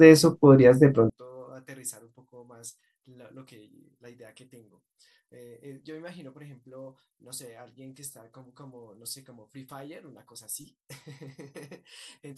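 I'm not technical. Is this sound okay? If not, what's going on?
No. From 1.1 s to the end, one channel is likely inverted, so the two sides cancel each other when combined and the speech nearly vanishes.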